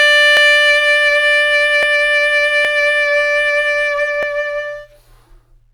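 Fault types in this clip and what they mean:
Dropped samples: a few samples likely went missing from the stream, under a millisecond each, so the music jumps and clicks sharply at 0.37, 1.83, 2.65 and 4.23 s.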